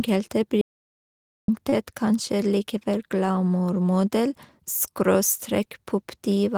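Speech runs for a little over six seconds, and at 0.61 s it cuts out to dead silence until 1.48 s. That is an audio dropout to silence: about 0.87 s of the talker is simply gone, with no room tone underneath. On a waveform the trace collapses to a flat line, and a spectrogram shows a clean black column with hard edges. The likely cause is the input being lost while the recorder kept writing silence. Shortly after, from 1.69 to 1.74 s, there is a short stall from a late packet. The receiver stretched the sound already playing by 29 ms to cover the gap, then carried on from the same point, so nothing is missing but everything after it sits 29 ms later. It is heard as a sound briefly held too long, with a faint buzz or dip. A spectrogram shows a short stretch of smeared, repeated harmonics, and the waveform shows a brief run of near-identical cycles.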